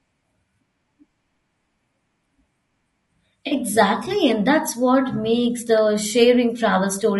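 Throughout the speech there is a rough, grainy quality, likely from low-delay AAC compression of the AAC-ELD kind used in video calls, at a rate that sounds consistent with about 32 kbps. At this low bitrate the spectrum is quantized coarsely, so noise fills the gaps between the pitch harmonics and the top band sounds thin and synthetic. On a spectrogram the harmonic stripes look blurred and speckled, with a patchy, smoothed-over upper region.

From 3.47 to 3.53 s comes AAC frame loss with concealment, a gap consistent with two lost frames, or about 40 ms of audio. The decoder rebuilt the missing stretch from the last good spectrum, so the sound briefly smears into a noisy or phasey blur instead of cutting out. In a spectrogram the harmonics dissolve into a short smudge of broadband texture. The waveform's envelope flattens oddly there, then normal detail resumes.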